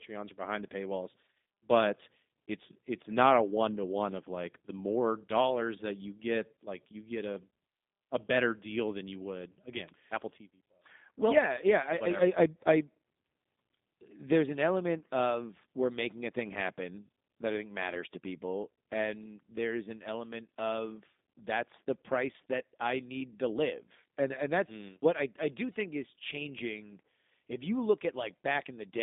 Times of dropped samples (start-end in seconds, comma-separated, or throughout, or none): none